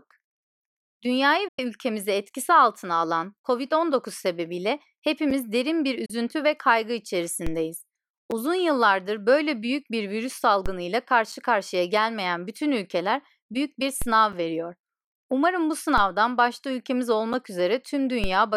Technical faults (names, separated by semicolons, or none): digital broadcast dropout; gap between chunks; DC step